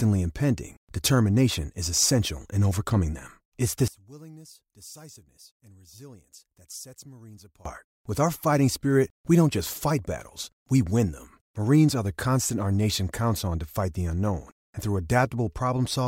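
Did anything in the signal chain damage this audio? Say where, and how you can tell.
Yes, from 3.88 to 7.65 s the speech drops about 24 dB, which points to one channel inverted, likely a polarity swap in the analogue wiring cancelling in mono.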